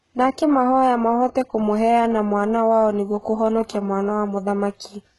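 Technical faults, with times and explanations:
throughout HE-AAC compression, likely: heavy damage, gritty metallic s sounds from treble copied up from lower bands, nothing above 11.5 kHz; spectrogram shows blocky, repeated treble patches.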